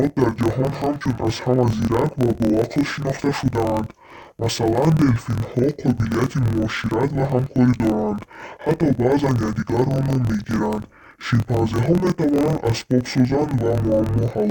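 Speech, with interleaved audio read as planar throughout. The voice sounds an octave low, doubled and choppy. Each 24 ms block of alternating left and right samples is split in half, and both halves play at half speed. This chops the sound 41.7 times a second.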